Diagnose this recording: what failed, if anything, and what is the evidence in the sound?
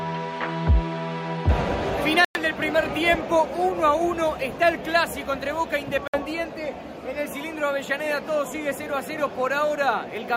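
The failure sits in the wireless playback link, and it sounds like a Bluetooth stall. The audio drops to silence twice. The first gap starts at 2.25 s and lasts about 104 ms. The second starts at 6.07 s and lasts about 61 ms. Each time the sound stops cleanly and then resumes. The likely cause is radio interference holding up packets. The headphones' buffer ran empty, and playback waited for the retransmitted data to arrive.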